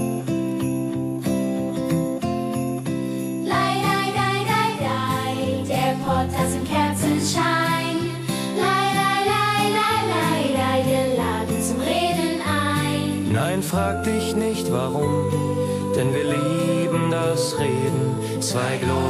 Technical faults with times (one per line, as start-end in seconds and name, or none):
none